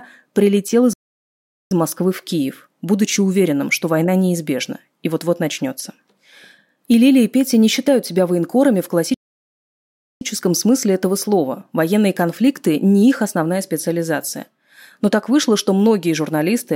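The player's output was likely starved, either by its buffer running dry or by a blocked playback thread, causing two playback stalls in this speech. From 0.93 to 1.71 s the sound stops mid-flow and goes silent for about 0.78 s. From 9.14 to 10.21 s a longer gap of about 1.07 s follows. Each time the speech cuts off abruptly, leaves a dead hole, and then resumes.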